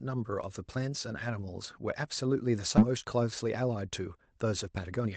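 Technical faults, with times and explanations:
2.77–2.79 s, skip ahead: About a second of audio is missing, and playback jumps straight forward with no gap. The audio was dropped, either in transit or by an overflowing jitter buffer, once newer audio was already queued. The two sides are butted together, so the sound lurches abruptly.
2.87–5.07 s, jitter buffer speed-up: The sound runs about 111% fast at unchanged pitch and feels hurried. The buffer held too much audio, so the receiver kept trimming tiny pitch-period slices, roughly a third of a second in total, to reduce delay.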